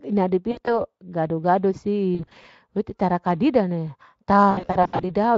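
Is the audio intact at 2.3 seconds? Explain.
No. From 2.15 to 2.45 s, VoIP packet loss concealed by the speech codec: 140 ms of gaps scattered over 280 ms, longest 40 ms, filled by extrapolating the last pitch and filter at falling gain. It sounds smeared, as a buzzy tone or coloured noise that fades. A spectrogram shows frozen, blurring harmonics, and the waveform envelope sags.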